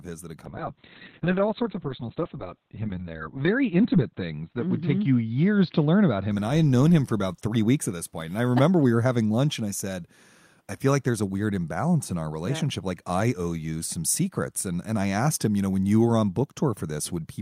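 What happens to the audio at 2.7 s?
The speech turns muffled and rough there: a call bitrate drop from 0.47 s to 7.79 s, after "his that had" and before "at this point", cuts encoding from 48 to 6 kbps and narrows bandwidth from 20 kHz to 4 kHz.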